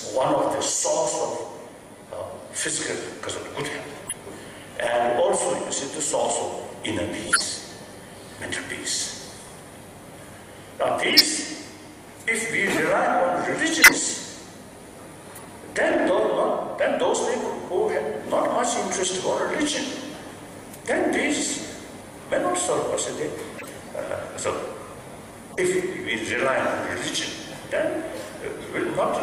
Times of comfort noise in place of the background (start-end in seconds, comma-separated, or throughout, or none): none